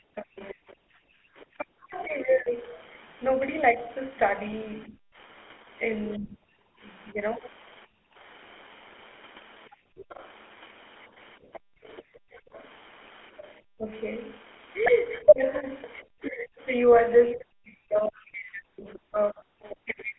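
Throughout the 20-second recording, the GSM full-rate codec gives the speech a buzzy, gravelly roughness that is plainly audible and fits a 13 kbps full-rate link. The line passes only about 250 Hz to 3.4 kHz. On a spectrogram, energy stops sharply above 3.4 kHz, and the harmonics look smeared and grainy instead of cleanly striated.

Between 0.13 and 7.18 s the speech repeatedly dips, thins or drops out in pieces, for about one and a half seconds in total, with cuts reaching about 30 dB. This is likely speech suppressed in double talk: the echo canceller mistook the talker for loudspeaker echo and turned everything down. On the waveform the envelope shows abrupt notches, and the spectrogram shows syllables fading or losing their upper bands.

The background is gated by the echo canceller from 1.07 to 1.31 s, with the room tone falling by about 31 dB for a fifth of a second. The canceller clamped the microphone while the loudspeaker played. 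The noise floor vanishes into a dark gap on the spectrogram and returns as the canceller lets go.

Gating returns from 6.68 to 12.53 s, deeper this time at about 36 dB, for about one and a half seconds in total. The spectrogram shows several dark holes in the noise floor between speech, and the waveform shows the quiet stretches dropping to near-silence in sudden steps.

From 9.97 to 19.76 s a second, fainter voice comes through, about 15 dB below the main speech. This is the other side's voice leaking through, likely from residual loudspeaker echo the canceller failed to remove. On the spectrogram it appears as weak harmonic traces beneath or between the main talker's.

Speech is suppressed in double talk again from 11.41 s to the end at 20.18 s, more severely this time, with drops of about 40 dB and about three seconds affected in total. The likely trigger is the overlap with the leaking far-end voice. 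The waveform shows chunks of speech collapsing almost to the floor, and the spectrogram shows syllables fading out entirely.

From 14.86 to 14.92 s, GSM bit errors produce a brief squawk and gargle. Corrupted filter, pitch or gain values reached the decoder, which fits about two damaged frames. The spectrogram shows a 60 ms smear of misplaced energy.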